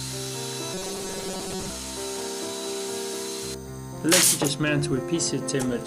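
From 0.74 to 1.70 s the sound goes robotic, a stiff metallic buzz pinned at 188 Hz. That's likely repeated short buffers: a tiny chunk, fitting roughly 5.3 ms, gets looped over and over while most of the real audio is skipped.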